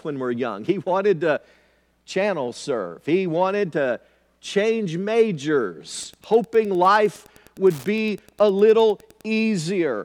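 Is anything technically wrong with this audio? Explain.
Yes. The speech carries Wi-Fi interference from 5.94 s to 9.21 s. A nearby Wi-Fi radio is coupling into the audio circuit. The circuit rectifies the radio bursts and turns them into audible clicks. The radio's beacon repeats every 102.4 ms. That gives a steady tick close to ten times per second, running under the speech. The ticking sits about 30 dB below the speech, faint but clearly regular. It stops at 9.21 s.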